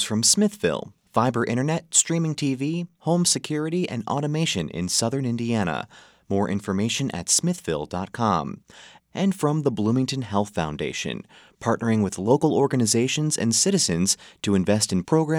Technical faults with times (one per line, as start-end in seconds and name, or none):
none